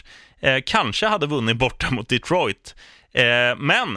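Speech recording, no audible faults.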